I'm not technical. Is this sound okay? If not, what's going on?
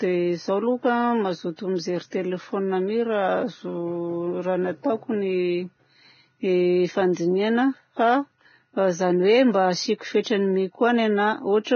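No. Throughout this speech there is heavy damage that sounds like Vorbis compression, likely from saving the file at a very low quality. Nothing is heard above 6.5 kHz. The treble turns hissy and grainy. Sharp starts of sounds get blurred.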